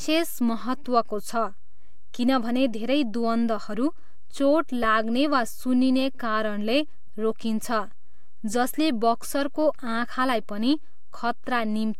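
Throughout the speech there is a DC offset of about -29 dBFS: the whole waveform sits shifted off the zero line by a constant amount. It cannot be heard as such, but it eats headroom, and a spectrogram shows a steady band of energy at 0 Hz.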